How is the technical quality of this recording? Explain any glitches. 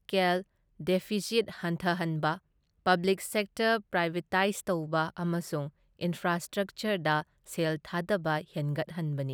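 No technical glitches can be heard in the recording.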